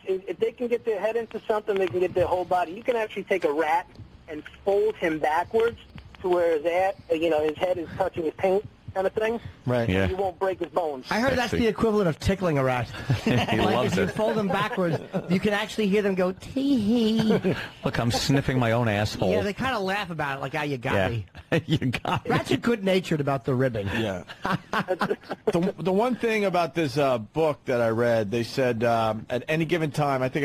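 At about 5.90 to 5.94 s there's a little hiccup where compressed frames got skipped. A stretch of the encoded stream either wasn't there or the decoder threw it out as damaged, so playback jumps forward by roughly 20 ms of audio. You hear the sound lurch ahead slightly.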